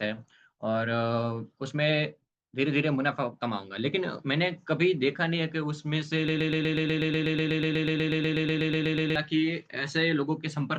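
From 6.28 s to 9.16 s the speech turns into a broken-record loop. A 123 ms fragment repeats exactly, back to back, 23 times, producing a rapid, mechanical stutter in place of whatever should have been said there. The likely cause is a player or stream that stalled and kept replaying the last piece it held, so that stretch of audio is lost. On a waveform the span shows identical tiled blocks; a spectrogram shows the same pattern stamped every 123 ms.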